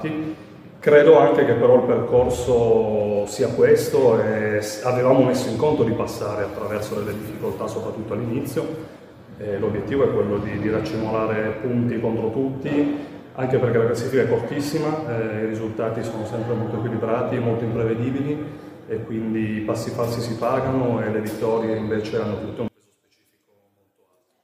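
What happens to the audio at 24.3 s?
One stereo channel has likely been inverted in polarity from 22.68 s to the clip's end at 24.43 s, so everything common to both channels cancels in the mono sum. The level drops by about 34 dB, leaving only a faint residue of what differs between channels.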